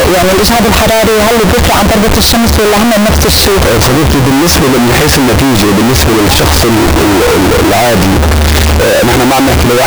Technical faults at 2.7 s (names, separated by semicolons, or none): float read as integer